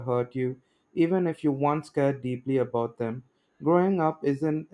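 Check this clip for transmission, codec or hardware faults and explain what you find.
Nothing here sounds off; the speech stays steady and intact all the way through, so there's nothing to flag.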